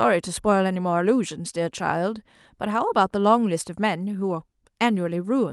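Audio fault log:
No technical faults can be heard in this speech recording. Nothing in the audio calls for an entry in the log.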